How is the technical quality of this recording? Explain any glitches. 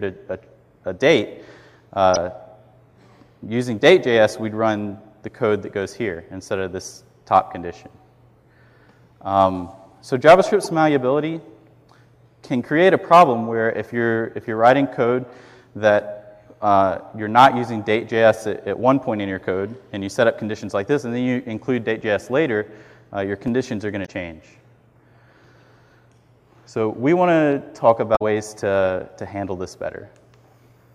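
The recording has four short glitches, all from damaged data in a compressed stream, at 2.14–2.17 s, 10.63–10.66 s, 24.02–24.09 s and 28.12–28.22 s. At each one, part of the encoded stream is corrupt, so the decoder misreads those frames, loses sync and hunts for the next valid frame header. The result is a brief chirp or squawk lasting roughly 30 to 100 ms.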